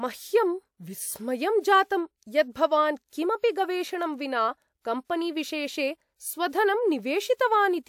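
Pre-echo at 3.09 s, 35 ms before "किमपि गवेषणं विना", and 5.05 s (51 ms): block-spread codec noise smears hiss ahead of attacks, visible as broadband haze before each onset on a spectrogram.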